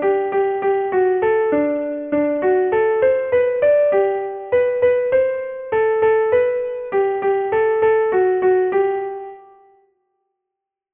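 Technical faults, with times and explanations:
Throughout: aliasing. The audio was reduced to a much lower sample rate without a proper low-pass filter first. The band stops hard at 3 kHz, which points to a rate near 6 kHz. Content that lay above 3 kHz has folded back below that edge, landing at wrong, unrelated pitches. These folded tones sit roughly 30 dB under the main signal. They give bright, hissy parts a gritty, metallic edge.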